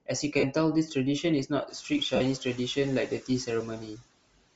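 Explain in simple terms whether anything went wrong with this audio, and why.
Several things went wrong, and they are audible.

The whole recording has a thin, plainly grainy and breathy edge, as if the crisp top of the sound had been swapped for a hiss. That is Bluetooth LC3 compression, and its likely cause is a wireless link squeezing the audio hard to save data. The codec throws away much of the fine high detail and fills the gap with noise, which is what gives the sound that grainy quality.

There are two brief smeared blips, at 0.39 s lasting about 38 ms and at 2.16 s lasting about 45 ms, where the sound turns into a short noisy blur. Those are lost LE Audio frames. Small chunks of audio never arrived over the wireless link, so the receiver patched each hole by reusing the last sound it had with the detail scrambled. The gap lengths fit runs of five and six tiny 7.5 ms chunks.

In three places, from 1.67 to 1.91 s, 3.08 to 3.29 s and 3.79 to 4.03 s, parts of the speech sound swallowed and faint. 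This is speech cut by the noise suppressor. The background noise of the room grows louder from about 1.5 s, which is ordinary room noise. The cleanup filter mistook bits of the speaker's voice for that background and turned them down along with it.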